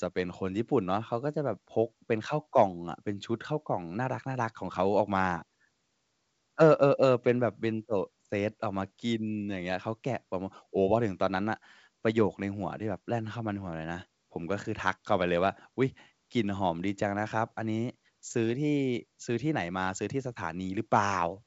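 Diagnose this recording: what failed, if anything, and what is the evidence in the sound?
Nothing in the speech points to a failure at any stage. The G.722 wideband telephone coding path sounds like its 64 kbit/s mode, with the speech reaching up to about 7 kHz and at most a faint hiss in the upper band.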